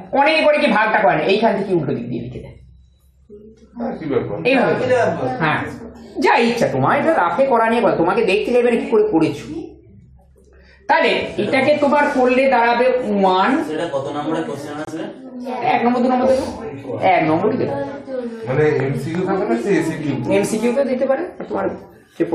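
There's one problem here: a corrupt frame muted at 14.85 s. The sound drops to dead silence with a hard, abrupt edge and comes back at 14.89 s, so the hole runs about 36 ms, which fits a single compressed frame. What's happened is that damaged bits in that frame made the decoder reject it, and the player filled the gap with silence rather than stalling. The timing carries on unchanged either side of the dropout.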